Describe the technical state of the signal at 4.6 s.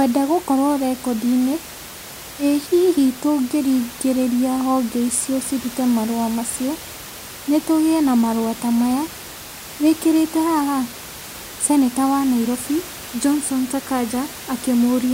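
At 4.6 s the signal is intact, with only the room's own background noise audible, sitting about 16 dB below the speech as part of the recording.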